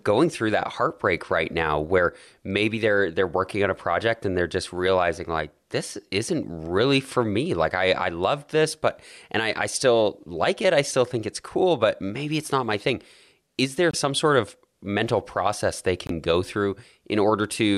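At 13.91–13.95 s, after "my thing is there", and 16.07–16.11 s, after "of mental process they", the sound cuts out briefly, likely a Bluetooth dropout losing roughly one 23 ms frame, showing as blank strips in the spectrogram and flat waveform gaps.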